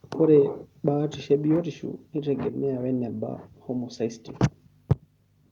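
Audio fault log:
1.56 s: microphone volume stepped down; the whole sound drops about 1 dB at once, not fading, likely the call software trimming input gain.
4.9 s: microphone overload; peaks hit the converter ceiling, about 6 dB over, with roughly a third of samples flattened, giving a harsh crackle, not a level change.
4.92 s: microphone volume stepped down; right after that distorted peak the level falls about 3 dB in one step, background included.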